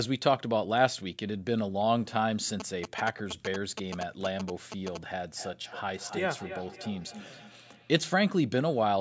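From 2.60 to 4.97 s, a nearby 2G phone exchanging signalling bursts is rectified by the audio circuit, producing GSM signalling bursts: a galloping dit-dit-dit of short 217 Hz buzzes, only slightly quieter than the speech. From 5.37 to 8.03 s, feedback echo between two devices on the same call loops speech back through a microphone, so it returns roughly every 0.3 s, thinner and ringing, peaking about 15 dB below the speech.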